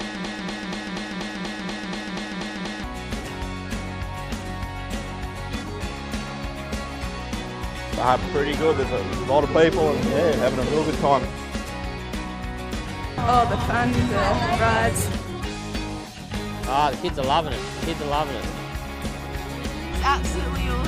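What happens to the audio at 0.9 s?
At 0.9 s the clip is inside a broken-record loop that is already running when the audio begins and lasts until about 2.84 s. A fragment of about 0.24 s plays back to back, identical each time, for 11 repeats. This likely comes from a stalled player, encoder or stream resending the last chunk it held. Whatever should have sounded across that span is missing, and normal audio resumes only after 2.84 s.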